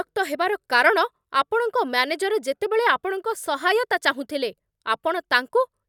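No technical faults can be heard anywhere in this speech recording. Nothing in the signal path draws attention to itself at any point.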